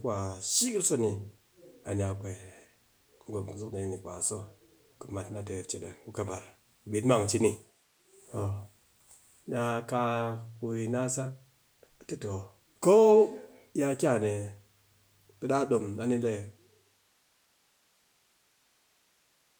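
Nothing faulty is audible in the speech, and the smooth fade-out starting around 16 s and complete by 17.27 s is an ordinary editorial taper with no hard edge.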